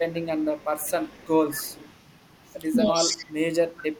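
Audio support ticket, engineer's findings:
Faint delayed copy of the speech, lagging about 198 ms, at 0.14–1.31, 1.51–1.93, 2.31–2.36, 3.20–3.27 and 3.76–3.86 s, roughly 15 to 40 dB under the talker. Echo leak: far-end loudspeaker pickup likely escaping the echo canceller.

Talker dips by about 10 dB, 2.92–3.26 s, while the far end talks. Speech suppressed in double talk: canceller likely cannot separate talker from echo and attenuates both.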